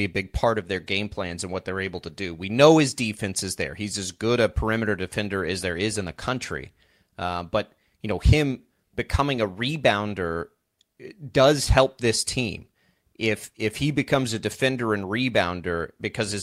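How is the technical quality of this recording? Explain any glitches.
No technical glitches can be heard anywhere in the recording. The speech runs on without any interruption or disturbance to the sound.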